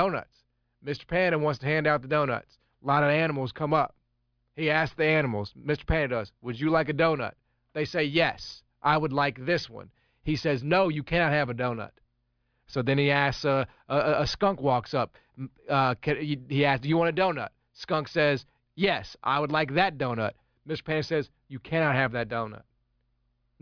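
No technical faults can be heard anywhere in the speech.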